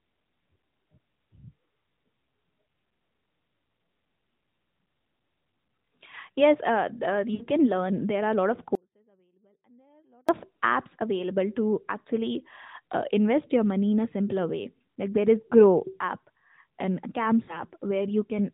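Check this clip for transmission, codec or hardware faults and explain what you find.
Three faults stand out in this narrowband mobile speech, where nothing passes above 4 kHz: two bursts of lost AMR speech frames and one long dropout to a faint residue.

Lost AMR speech frames occur at 7.34–7.44 s, between "uh the" and "can learn", and at 17.44–17.59 s. Corrupted frames were concealed by repeating the last good pitch and spectral settings at falling gain, so sound smears and sags briefly. The 60 ms gap fits three 20 ms frames, the later one about two. Unlike a dropout, the sound is stretched rather than cut.

An audio dropout to a faint residue runs from 8.75 to 10.29 s, after "are a lot of" and before "of apps available to". For 1.53 s the sound cuts abruptly to a faint leak about 35 dB down, likely from losing the wanted signal while the path stayed live. Unlike concealment, there is no drawn-out decay.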